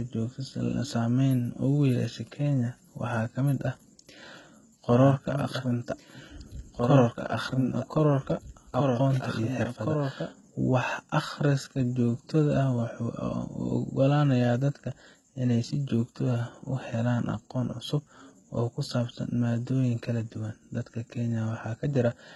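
HE-AAC compression runs through the whole speech recording. The treble is heavily damaged and stops dead at about 11.8 kHz. The bright top band is likely rebuilt by spectral band replication rather than coded, fitting a very low bitrate near 16 kbps, so s sounds turn gritty and lispy. A doubled audio track appears from 4.91 s to 10.29 s: a second full-band copy of the speech trails about two seconds behind, roughly 5 dB quieter, with no decay or room colour, and it switches on and off abruptly, likely from an edit holding two offset copies.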